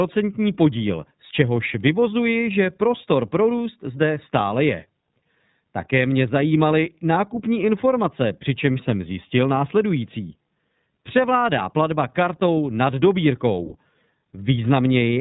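From start to finish the speech carries iLBC codec damage, plainly audible. Each 30 ms frame's excitation is coded on its own at a rate that fits 13.33 kbps, leaving a slightly rough, synthetic edge. A spectrogram shows energy stopping flat at 4 kHz, with nothing above.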